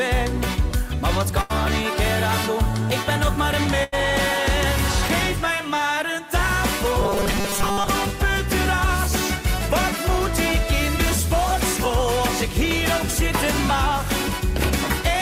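At 1.41 to 1.52 s and again at 3.84 to 3.94 s, there is a burst of packet loss. About 80 ms of audio is missing each time. The receiver stretches the last sound and lets it fade, then jumps ahead.

From 7.01 to 7.89 s, the sound turns into a rigid, metallic buzz at 200 Hz. This is robotic sound from repeated short buffers. It likely comes from a 5 ms chunk being looped while most of the real audio is skipped.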